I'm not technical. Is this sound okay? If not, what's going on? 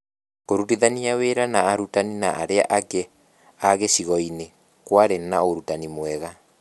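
Yes, this one's fine, with nothing going wrong anywhere in the recording that you'd need to worry about.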